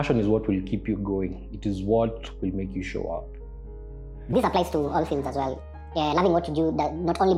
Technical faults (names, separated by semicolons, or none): section at the wrong speed